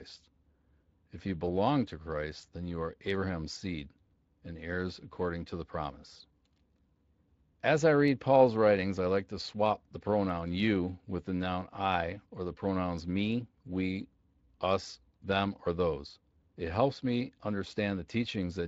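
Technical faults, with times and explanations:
Throughout, Speex codec: hoarse, noisy speech as starved CELP excitation smears detail; spectrogram shows blurred harmonics, suggesting roughly 20 kbps.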